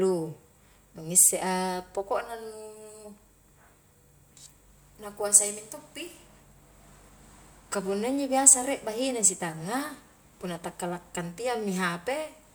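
No audible technical faults anywhere in the recording.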